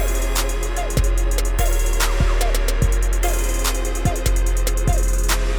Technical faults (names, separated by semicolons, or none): none